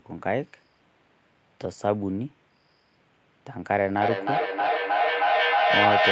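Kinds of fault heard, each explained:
lost packet rebuilt from error correction: Brief rough, noisy patches at 0.43 to 0.45 s, 1.63 to 1.73 s and 4.65 s, where lost packets were replaced by low-bitrate copies carried in the following packet. Unlike plain loss concealment, there is no dropout or smeared, buzzy fill. The sound continues, just coarser.
feedback echo between two devices: From 3.93 s to the end, the sound returns as distinct repeats roughly every 300 ms. A second device's playback is being picked up by a microphone again. The repeats peak about 2 dB above the direct speech and pile up, whereas room reverberation is a smooth, decaying tail.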